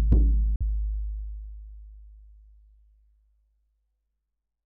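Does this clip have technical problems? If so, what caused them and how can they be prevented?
Yes. From 0.56 to 0.63 s the sound cuts out completely and then returns further along, as if it had kept playing during the gap. This is most likely a Bluetooth dropout: audio packets failed to reach the headphones in time and were discarded, which points to a couple of lost packets. On a waveform it appears as a flat gap, and on a spectrogram as an empty vertical strip across all frequencies. To prevent it, keep the source close with a clear line of sight and reduce 2.4 GHz interference.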